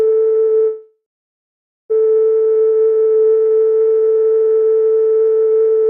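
A music clip with a call audio freeze from 0.67 to 1.92 s: the last sound lingers as a fading buzz, then about 0.88 s of silence, and the music resumes exactly where it stopped. Unlike a dropout, nothing is lost. The likely cause is delayed packets draining the jitter buffer.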